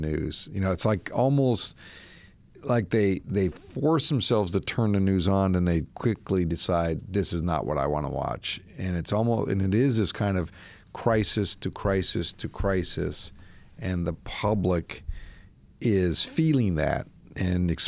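Listening closely to the speech, nothing stood out as a technical fault at any point.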